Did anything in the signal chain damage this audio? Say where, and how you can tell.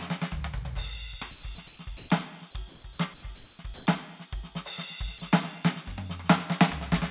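Yes. The damage is in call processing, at the sender's voice detection stage, heard over a narrowband call path that stops near 4 kHz and fits G.711 A-law at 64 kbps.

Comfort noise in place of the background appears at 1.31–1.43, 1.67–1.79, 1.97–2.09, 2.69–2.84, 3.14–3.23, 3.35–3.59 and 3.74–3.86 s. In each quiet stretch of the music, about 21 to 29 dB below the loud passages, the textured background gives way to flat, featureless hiss. The level jumps noticeably in some gaps, by about 9 dB at 1.97 s and about 12 dB at 3.74 s. The likely cause is discontinuous transmission: the sender stops sending and the receiver synthesises noise shaped roughly like the background.

Sound dropped by the voice detector occurs at 1.55–1.58 s. For 30 ms, real musical content is replaced by the same synthetic noise and then returns. The likely cause is that the detector misread the music as background and stopped sending. 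The receiver filled the hole with comfort noise until the detector triggered again.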